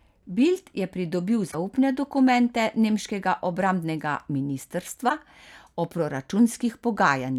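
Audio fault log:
1.48–1.55 s and 5.06–5.11 s, damaged data in a compressed stream: two brief glitches, about 70 ms and 56 ms long. The first comes just before "dokumente nemškega obrambnega". Corrupted bytes in the encoded stream made the decoder misread those frames and lose sync, so it produced garbage briefly, then skipped forward to the next valid frame header and resumed.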